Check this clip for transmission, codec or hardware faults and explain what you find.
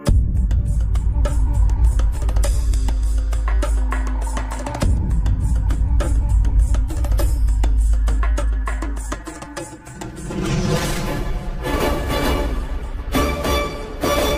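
One fault is present. From 9.15 to 11.73 s the sound turns hollow and phasey, with fixed notches: channel delay (comb filtering). One channel lags the other by around 5 ms, so summing to mono cancels shared content at evenly spaced frequencies, starting near 100 Hz.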